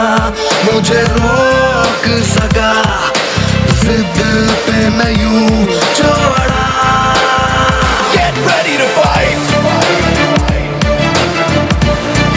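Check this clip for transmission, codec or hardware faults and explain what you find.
One fault is present, and it runs through the whole clip: gain pumping. The gain swings by roughly 5 dB, so loud and quiet passages sit unnaturally close in level and the whole thing sounds squashed. The likely cause is input gain set far too high, with a fast limiter or compressor clamping down on each peak and releasing in the pauses. The band-limiting to 8 kHz and below comes from the call's microphone processing and is not part of the fault.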